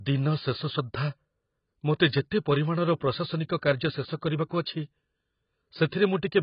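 From start to finish the speech is dull and smeared, with nothing above about 5.1 kHz and a watery, warbling texture on held vowels and fizzy, broken sibilants. The likely cause is heavy AAC compression, in the manner of AAC-LC at a very low rate, around 16 kbps. A plain low-pass filter would dull the top just as much but leave the remaining band clean. Here the damage is inside the band too: quantisation has left gaps and swirling noise in it.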